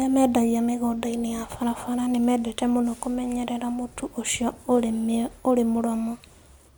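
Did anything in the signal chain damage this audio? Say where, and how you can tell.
No, I can't hear anything in this speech recording that points to damage from the signal chain. No stage, from the analogue wiring through conversion and processing to playback, leaves an audible mark I can place at any point in the clip.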